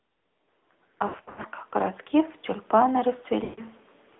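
AMR narrowband mobile codec, throughout: the audio passes only about 250 Hz to 3.6 kHz, with a plainly buzzy, synthetic edge that fits a mid-rate mode near 10 kbps.

Lost AMR speech frames, 1.08 to 1.46 s: the decoder repeats its last good settings at falling gain, so about 240 ms of gaps scattered across this stretch warble and dip, the longest dropout lasting 80 ms. It happens again at 3.44 to 3.62 s, where 140 ms of lost frames drag out and fade before the sound returns.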